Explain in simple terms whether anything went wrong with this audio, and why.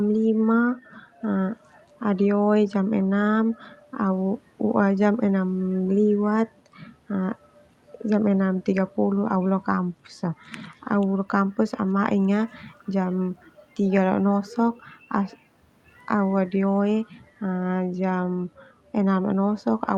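Nothing went wrong here; it sounds like an ordinary call.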